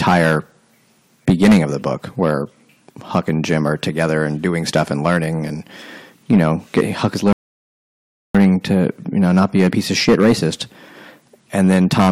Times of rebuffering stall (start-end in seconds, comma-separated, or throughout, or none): 7.33-8.35